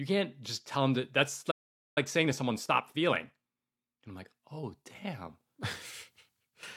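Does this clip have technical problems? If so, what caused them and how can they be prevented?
Yes. A playback stall hits at 1.51 s, right after "tell them that that's". The speech stops mid-flow and the output goes silent for about 0.45 s, until 1.98 s. The player likely ran out of buffered data, or its audio thread was blocked for a moment. Either way, nothing reached the output until it recovered. To prevent it, keep a deeper playback buffer and give the audio thread priority so other work cannot block it.

Time-compressed catch-up follows from 1.98 s to 4.98 s. To recover the lost time, the player cuts out small pieces and cross-fades the joins. The speech runs about 1.15 times faster for those three seconds. Its pitch stays normal, but it sounds hurried. To prevent it, avoid the stall that builds the backlog, or let the player resume with a short delay instead of compressing.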